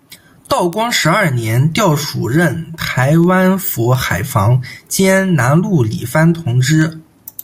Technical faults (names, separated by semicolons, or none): word clock ticks